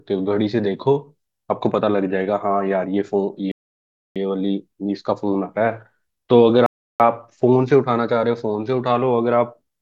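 Speech that drops to silence twice, from 3.52 to 4.16 s and 6.66 to 7.00 s, then resumes: likely a Bluetooth stall, the headphone buffer running dry while delayed packets were resent.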